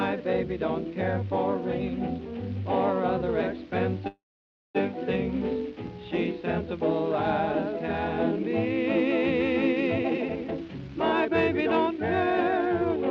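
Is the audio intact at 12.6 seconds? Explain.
No. From 9.96 to 12.97 s a jitter buffer speed-up is running: the receiver cut short pitch-period pieces over and over to drain built-up delay, removing roughly 0.7 s. The sound plays hurried at 121% speed, yet its pitch stays unchanged, unlike a resampling speed-up.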